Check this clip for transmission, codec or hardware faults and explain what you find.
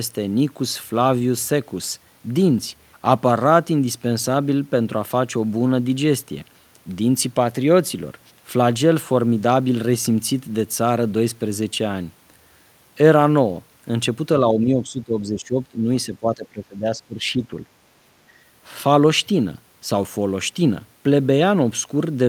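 The speech is pulled down twice, from 14.54 to 15.88 s and from 16.06 to 17.65 s, dipping by roughly 10 dB and then as much as 20 dB. The likely cause is speech suppressed in double talk, where an echo canceller mistook the talker for loudspeaker echo. On a waveform the envelope visibly shrinks, and a spectrogram shows the energy thinning out in those stretches.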